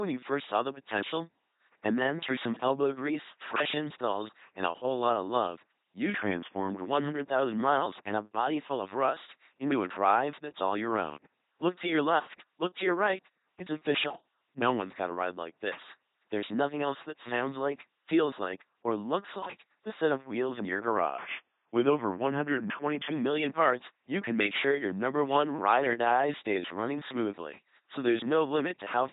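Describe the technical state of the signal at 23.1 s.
A drift correction step runs from 20.97 s and ends at 23.12 s, right at this moment. The speech plays about 6% slow and roughly 109 cents flat, just over a semitone, before snapping back to normal rate. This is likely a clock-matching stage changing playback rate in one step to rebalance its buffer.

The LPC-10 vocoder damage is heavy here too, as it is across the whole clip. At 2.4 kbit/s, a ten-pole vocal-tract filter is excited by either a pulse train or noise, so the speech sounds buzzy and mechanical, with nothing above 3.9 kHz.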